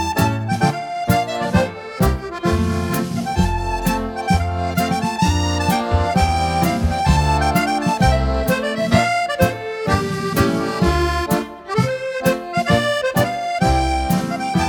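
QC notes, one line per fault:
Nothing to flag here; I listened all the way and heard no problems worth a line.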